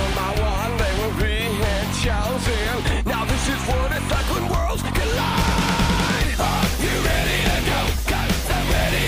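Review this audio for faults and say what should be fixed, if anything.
No faults turn up in this audio, so nothing needs to be fixed.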